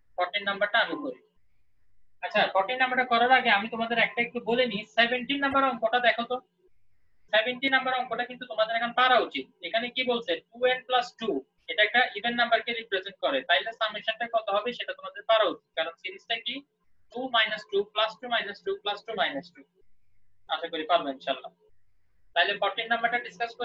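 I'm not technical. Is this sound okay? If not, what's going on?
No. At 5.50 to 5.54 s and 17.10 to 17.14 s there are brief glitches from damaged data in a compressed stream. Bits of the stored file are corrupted, so the player misreads them and scrambles the sound. That decoding error, rather than a gap in the recording itself, sets it apart from a simple dropout.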